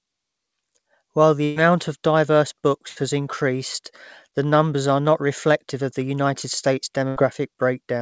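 Speech over a wideband call path with no content above 8 kHz, with three bursts of packet loss at 1.44–1.59 s, 2.88–2.99 s and 7.08–7.19 s: each gap is concealed by a fading continuation of the preceding sound, and roughly 120, 80 and 80 ms of audio are skipped.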